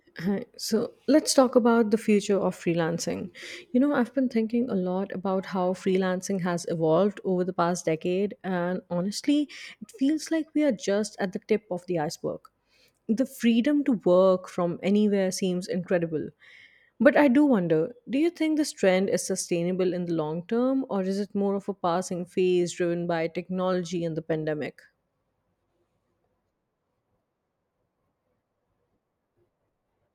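No technical faults can be heard anywhere in the speech.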